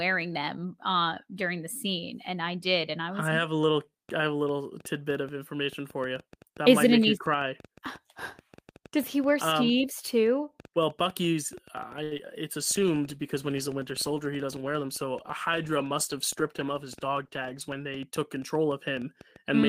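From 4.09 s to the end of the clip, a train of clicks runs over the speech. They come about seven times a second, at an uneven pace. Each click has much the same shape and peaks at roughly the level of the speech itself. They tick through the pauses as well as the talking. The likely cause is interference from nearby equipment or a faulty connection or power supply, which injects a repeated pulse into the signal.

At 12.03 s comes a short stall from a late packet, lasting until 12.14 s. A packet arrived late and the jitter buffer ran dry. The receiver held the last sound for about 79 ms until the data turned up, then carried on from the same point. Nothing is lost. The sound is simply drawn out, with a slight buzz or dip, and playback now runs about 79 ms further behind.

Just after, from 12.18 to 12.21 s, there is a short concealed packet loss. About 20 ms of audio never reached the decoder in time. 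The receiver patched the gap by extending the preceding sound and blending back into the real signal. It is heard as a tiny smear or wobble, and a brief consonant there could drop out.

From 12.58 s to 18.09 s the call suffers a bitrate drop. The bandwidth estimate fell, and the encoder went from 48 kbps to 15 kbps, staying at the low rate for about 5.5 s. With so few bits, Opus codes the speech coarsely and trims the high frequencies. The speech turns muffled and watery. Clarity returns once the rate climbs back.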